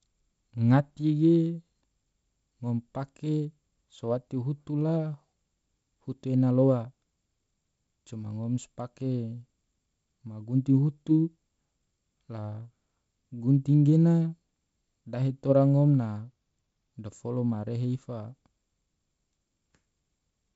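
The speech carries the character of G.722 wideband telephone coding, with content reaching up to about 7.7 kHz and a faint hiss in the upper band, and the slightly grainier lower band points to its 48 kbit/s mode, with no faults to report.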